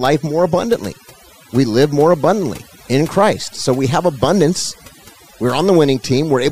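A short speech clip with overdone noise removal the whole way through: the background drops and breaks up into twinkly specks.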